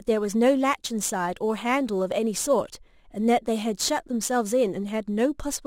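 Right through the speech there's crude rate conversion: a gritty, inharmonic fizz riding on louder and brighter sounds. That fits a 44.1 kHz to 48 kHz conversion done by repeating samples, leaving error roughly 25 dB down.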